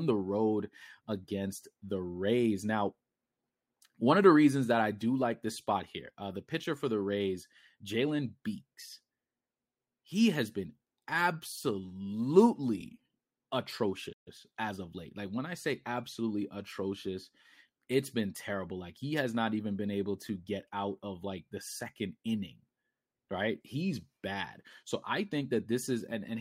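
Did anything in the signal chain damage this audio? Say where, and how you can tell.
Yes, at the playback stage. A playback stall cuts the speech off mid-flow at 14.12 s. Silence follows, lasting about 135 ms, and the speech resumes at 14.28 s with "as of late". The likely cause is the player running out of buffered data or its audio thread being blocked. Output went quiet until data arrived again.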